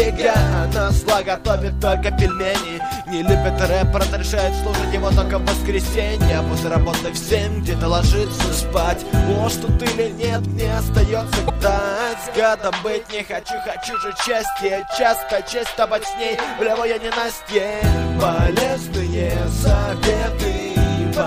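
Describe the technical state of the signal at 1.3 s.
At 1.3 s the signal is intact, with no audible fault at that point.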